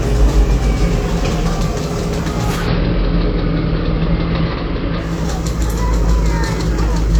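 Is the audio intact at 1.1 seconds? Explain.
Yes, the audio is intact at 1.1 seconds, with no audible fault at that moment.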